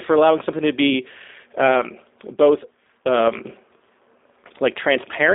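From start to finish, the speech carries G.729 codec damage, plainly audible. The codec rebuilds each 10 ms frame from a vocal tract filter, a pitch predictor and a few pulses at 8 kbit/s. The line passes about 250 Hz to 3.7 kHz. Nothing sits above 3.8 kHz. Speech sounds rough, thin and synthetic.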